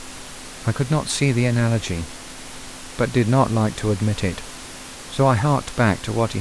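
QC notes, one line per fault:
No faults found.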